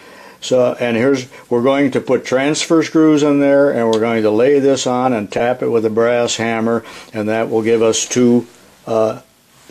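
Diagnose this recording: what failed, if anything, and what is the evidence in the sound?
Corrupt frame concealed at 5.37 to 5.41 s, a codec fault: one damaged AAC frame was detected and covered, leaving a brief soft-edged dip, with timing intact.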